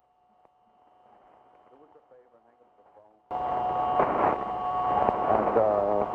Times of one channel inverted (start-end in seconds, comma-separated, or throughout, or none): 0.00-3.31